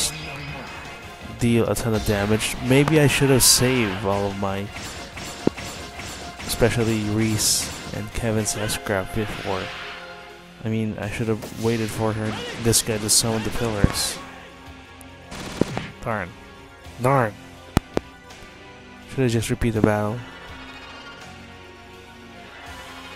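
Loud pops land at 2.88–2.98 s, 5.47–5.50 s, 13.84–13.93 s, 15.62–15.80 s, 17.77–18.00 s and 19.84–19.86 s, mostly as double thumps, peaking roughly 20 to 25 dB above the sound. They are likely voltage pulses from switching or static, unlike dropouts, since the audio continues underneath.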